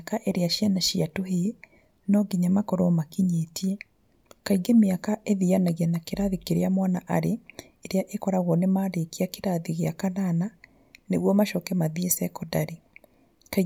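No audible technical faults anywhere in the speech recording.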